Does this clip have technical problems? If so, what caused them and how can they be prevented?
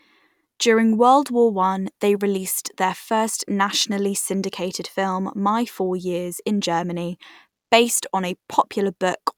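No, there are no technical problems to report here.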